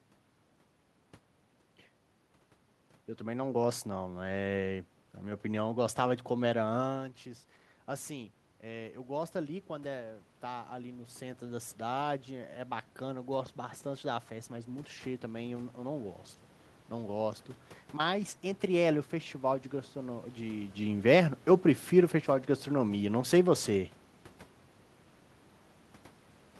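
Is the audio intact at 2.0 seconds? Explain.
Yes, the audio is intact at 2.0 seconds; the only thing audible there besides the speech is the ordinary background noise of the room, which is part of the recording and not a fault.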